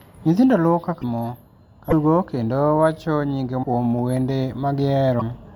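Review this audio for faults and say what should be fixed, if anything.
Brief glitches and small skips in the speech at 1.01–1.04, 1.90–1.93, 3.62–3.65 and 5.19–5.22 s, each about one 26.1 ms frame long, likely a broken MP3 bit reservoir: frames were dropped, so the following frame reads borrowed bits from the wrong data. To prevent it, cut or splice on decoded audio or at frame boundaries that keep the reservoir intact, and avoid losing frames in transit.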